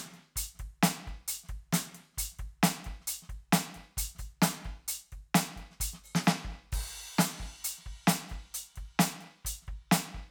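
A short piece of music, and nothing technically wrong turns up anywhere in it.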